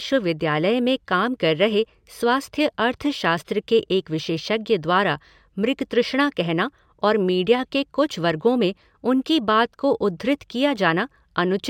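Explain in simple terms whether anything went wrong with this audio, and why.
Something did go wrong, all the way through: imaging from linear upsampling. It sounds like the speech was stretched to a higher rate (which fits going from about 22 kHz to 44.1 kHz) by simply joining the dots. The top end is dulled, and a faint mirrored copy above roughly 11 kHz adds a light metallic shimmer on s-sounds.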